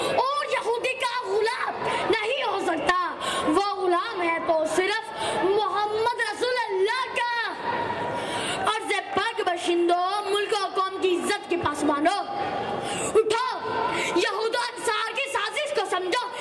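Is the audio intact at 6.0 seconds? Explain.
Yes, the audio is intact at 6.0 seconds, with no dropout, click, distortion or other fault audible at that point.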